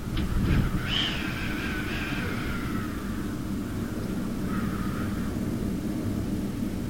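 Throughout, grainy distortion tracks the sound, roughing up quiet passages. This is low bit depth without dither, likely truncation to 6 bits, leaving error only about 20 dB down.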